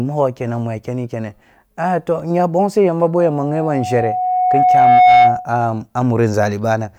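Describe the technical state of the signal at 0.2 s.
At 0.2 s the speech signal is intact, with no audible technical fault at that moment.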